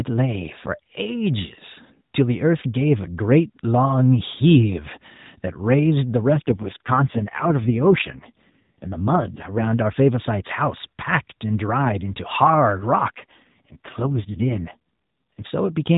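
An AMR rate drop runs from 6.34 to 9.68 s and again from 13.12 to 15.47 s. Each time the speech turns rougher, buzzier and more synthetic, with the band unchanged and no gap, as the codec falls back to fewer bits for the waveform and more for error protection. The coarseness fits a step from the 12.2 kbps mode down to 4.75 kbps, recovering afterwards to the lightly coloured AMR-NB sound, still capped at 4 kHz.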